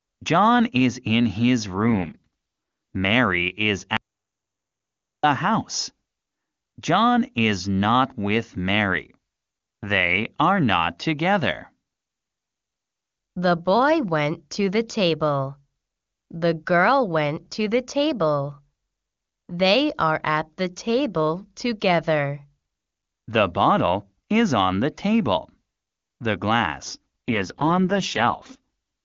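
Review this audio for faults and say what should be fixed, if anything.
Two AMR rate drops show up in this speech, from 1.74 to 2.96 s and again from 27.28 to 28.59 s. Both times the link falls from 23.85 kbit/s, where the AMR-WB speech sounds clean, down to 6.6 kbit/s, the codec's lowest mode. Bandwidth holds and nothing cuts out, but the voice turns raspy and synthetic because the coder is spending its shrunken budget on error protection instead of detail. To prevent it, improve radio coverage or signal quality on that call path so the network doesn't need to throttle the codec.

There's also an audio dropout to silence from 3.97 to 5.23 s, so about 1.27 s gone. It's plain silence, with no room tone underneath, and the speech stops and restarts mid-flow, so whatever was said in that stretch is lost. That pattern points to the input feed vanishing while the recorder kept writing, most likely a momentary disconnect or a stray mute upstream. 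To prevent it, secure the input connection and add monitoring that flags a sudden total loss of signal during capture.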